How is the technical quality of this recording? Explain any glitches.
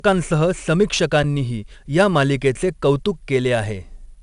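The recording quality is poor: coarse compression damages the whole speech clip, and one brief dropout interrupts it.

Throughout, a 4-bit ADPCM compression codes each sample as a small step from a predicted value, with a step size that adapts continually. Its error rides along as broadband grit under every loud passage, plainly audible here, with roughening on sharp onsets where the step lags. Nothing is present above 10.6 kHz, and the density of damage fits a rate around 88 kbps.

At 1.23 s, an underrun with a held sample occurs: the output buffer ran dry and the converter froze on its last value for about 8 ms. The waveform flattens into a short stall. Little or no audio appears to have been lost, so playback picks up where it paused and the resumption is soft rather than a hard click.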